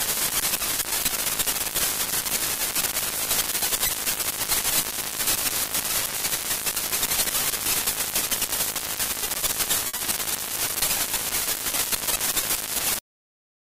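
At 9.87 s a short stall from a late packet holds the sound for about 60 ms until the packet arrives. Nothing is lost, but timing slips 60 ms. At 12.99 s a cut-off end truncates playback mid-sound, dropping straight to digital silence without decay.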